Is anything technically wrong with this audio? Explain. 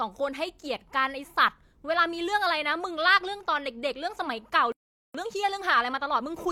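Yes. At 4.72 s the speech cuts off in mid-flow and the output goes silent for about 0.42 s, until 5.15 s. This is a playback stall, likely from the player running out of buffered data or its thread being blocked. On a waveform it shows as a flat line, and on a spectrogram as a blank vertical band with hard edges on both sides.

From 5.15 s to the end the speech runs at 1.1 times its normal speed, with pitch unchanged. This is time-compressed catch-up: to work off the backlog the stall left, the player removes small slices of audio and cross-fades over the joins. The speech sounds hurried. On a spectrogram the syllables and pauses look compressed in time while the harmonic spacing stays the same, and the seams may show as small discontinuities in the harmonic lines.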